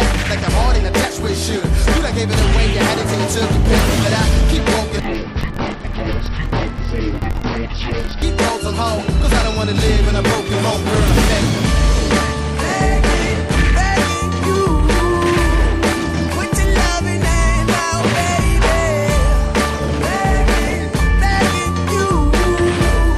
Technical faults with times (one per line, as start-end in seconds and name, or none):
5.00-8.22 interleaved audio read as planar